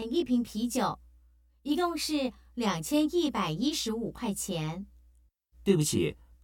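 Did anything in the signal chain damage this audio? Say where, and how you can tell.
Yes. There's channel delay (comb filtering) for the whole clip, most likely from the driver or buffer stage when the stereo pair was folded to mono. One side runs roughly 20 ms behind the other, so anything common to both channels cancels at evenly spaced frequencies starting around 30 Hz. You can hear it as a rough, slightly doubled colour that never moves, because the notches sit fixed in the spectrum from start to finish.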